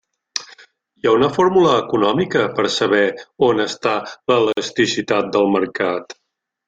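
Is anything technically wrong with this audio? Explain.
Yes. A gap at a join of encoded pieces, 4.53 to 4.57 s: untrimmed encoder delay and padding leave a 47 ms silence with smeared edges before the speech resumes.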